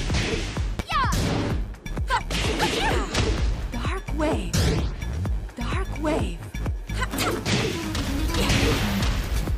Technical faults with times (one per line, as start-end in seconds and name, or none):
0.79-0.82 loud pop
8.72-8.95 loud pop